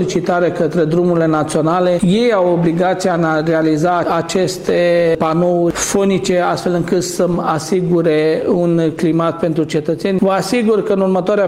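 No technical faults are audible.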